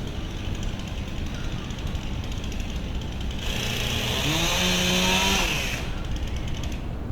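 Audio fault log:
3.41 s, skip ahead: Playback jumps straight from one moment to material about a second later, with no silence in between, because that stretch was discarded while later audio was already queued. The two sides are butted together, so the sound changes abruptly and whatever was in progress is cut short. On a waveform the envelope shifts suddenly at a single point; on a spectrogram the patterns on either side fail to line up, with a sharp vertical seam.
4.22 to 6.32 s, jitter buffer speed-up: The receiver had built up more audio than it needed and trimmed it back by repeatedly cutting out tiny pieces a pitch period or so long, about a fifth of a second in total. The result runs at 109% speed with unchanged pitch, so the sound feels rushed. On a spectrogram harmonic spacing stays the same while events arrive closer together; the waveform shows compressed timing.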